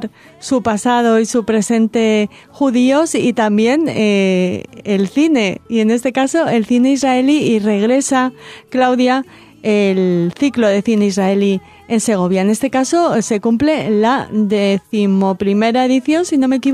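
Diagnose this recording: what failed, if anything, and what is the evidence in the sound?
Nothing failed in this recording, and the sound shows no evidence of a fault.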